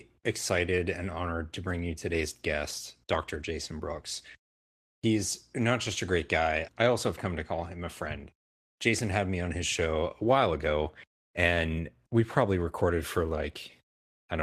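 No technical faults can be heard anywhere in the recording. The speech runs from beginning to end without any interruption or disturbance in the signal.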